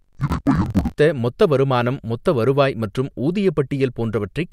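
From 0.0 to 1.0 s the speech drops a full octave, about 12 semitones, and sounds doubled and choppy. This is interleaved audio read as planar. Each block of alternating left and right samples was split in half, with each half taken as one channel. Both halves play back at half speed, so the pitch falls, but they play side by side. That keeps the pace normal, which separates this from a plain slowdown. The chop repeats every 21.33 ms, about 47 times a second, which fits a 1024-sample block.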